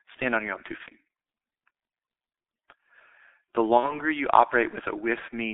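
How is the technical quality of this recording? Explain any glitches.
Poor: the speech is narrowband and heavily coded throughout, with two short concealment glitches.

Throughout, the speech sounds muffled and hoarse, with smeared consonants and no content below 250 Hz or above 3.7 kHz. This is heavy G.723.1 codec damage. The codec models speech in 30 ms frames at a very low rate, consistent with about 6.3 kbit/s. Its slowly updated voice model can't follow fast changes, so transitions blur and the timbre turns rough.

At 0.83–0.93 s, just after "on your own two", the speech briefly turns into a stretched, buzzy or noisy sound that fades and stays weak for a moment. At 3.78–4.00 s the same thing happens for longer. Both are VoIP packet loss concealed by the speech codec. The decoder filled the gaps by extending its last pitch and filter settings at falling gain. The first event fits one lost 30 ms frame and the second fits two, about 60 ms. 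Because each frame depends on the previous one, the distortion continues past the gap before the speech recovers.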